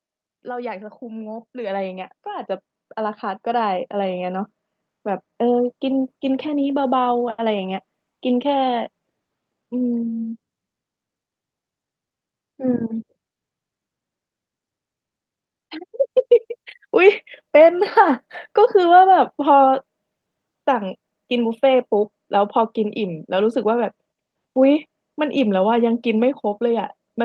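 A speech recording carried over a call link, with an automatic gain rising fault at the start. From 0.42 s to 7.83 s, the level climbs steadily by about 16 dB. The gain control judged the input too quiet and kept turning it up. Because it raises everything at once, the voice and the background noise swell together. The slow climb over several seconds is the giveaway. The band-limited tone fits a call codec working at around 12 kHz bandwidth.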